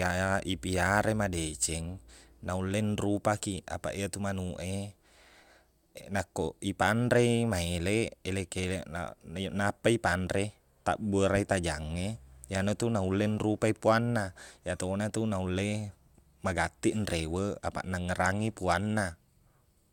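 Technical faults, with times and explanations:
No technical faults can be heard anywhere in the speech recording.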